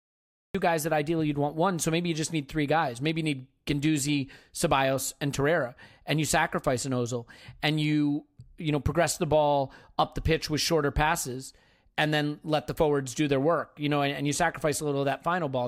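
Speech that has a cut-off start: the file holds digital silence until 0.55 s, then the audio enters mid-sound at "guys that ideally you'd" with no attack or fade, as if recording began late. A fade-in would ramp up gradually instead.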